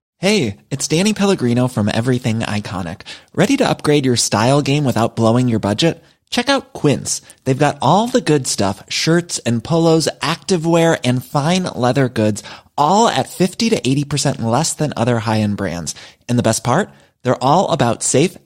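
No faults audible anywhere in this speech recording; nothing to flag.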